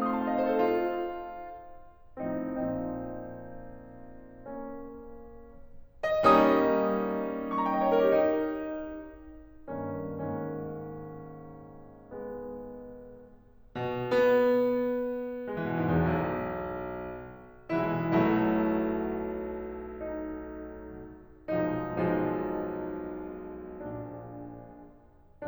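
No technical faults are audible.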